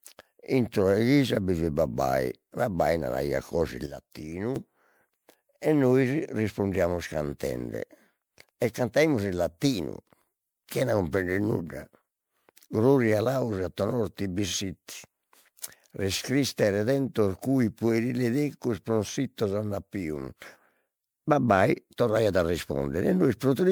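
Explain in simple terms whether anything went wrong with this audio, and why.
Throughout the speech there is generation loss: the sound is swirly, smeared and hollow, and the starts of sounds are blurred. This likely comes from the audio being saved in MP3 form about seven times over, with each pass discarding a bit more detail.

There are also two sudden gain jumps, likely from a volume setting applied instantly instead of being eased in. At 3.86 s the voice and the background hiss together drop sharply quieter until 4.56 s. At 20.42 s both jump noticeably louder until 20.56 s.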